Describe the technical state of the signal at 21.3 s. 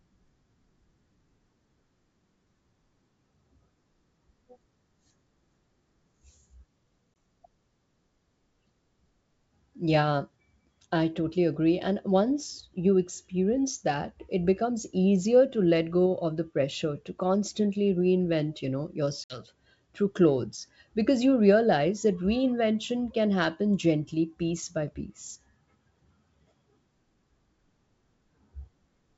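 At 21.3 s the speech is intact, carried by G.722 wideband telephone coding at 64 kbit/s, which keeps the sound clear up to about 7 kHz with at most a faint hiss in the upper band.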